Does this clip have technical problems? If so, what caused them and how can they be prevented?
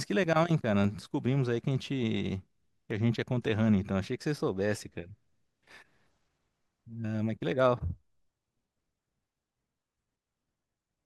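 Yes. Dropped samples are the likely cause: twice, the stream lost a tiny run of samples, well under a millisecond each, probably when a buffer briefly ran short. Because no sound goes missing, the speech doesn't skip, but the waveform jumps abruptly to a later value, producing a single sharp click at 0.84 s and again at 2.91 s. Giving the audio path larger buffers and higher thread priority prevents these gaps.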